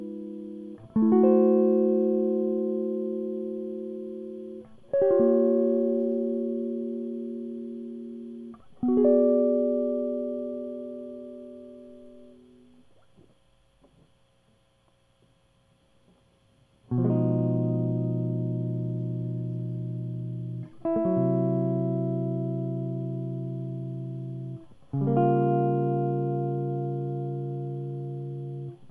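Nothing in this music stands out as a technical fault; it just runs along without any glitches catching the ear.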